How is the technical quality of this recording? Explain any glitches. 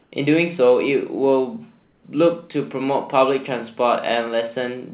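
Two brief patches of comfort noise replace the background, in speech carried over a narrowband call path with nothing above 4 kHz. From 0.02 to 0.12 s and from 1.84 to 2.04 s, the background becomes a flat, featureless hiss about 3 dB quieter. This is likely discontinuous transmission, where the receiver synthesises noise during pauses.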